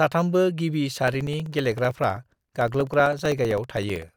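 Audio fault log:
1.08 to 4.09 s: periodic USB or driver dropouts. Every 64 ms, about 2 ms of speech drops to silence, heard as regular ticks while sound plays.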